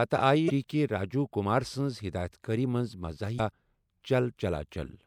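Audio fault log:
0.46–0.50 s and 3.36–3.40 s, damaged data in a compressed stream: two short bursts, each about 44 ms, where the speech is briefly disrupted. Part of the compressed stream got corrupted at those spots, so the decoder couldn't make sense of the frames there. It lost sync and had to hunt for the next valid frame header, and that garbled stretch is what comes out as the blip.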